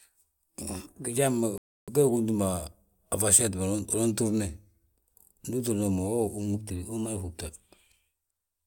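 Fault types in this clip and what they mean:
Drift correction step: The speech suddenly runs 6.03% fast and 101 cents sharp, about a semitone, from 0.62 to 1.15 s and from 6.54 to 7.38 s, then snaps back. Clock-matching software likely stepped the playback rate to rebalance its buffer.
Bluetooth stall: The speech drops to 299 ms of silence between 1.58 and 1.89 s, then carries on. Interference likely held up wireless packets, so the headphones' buffer ran empty and playback paused until the resent data arrived.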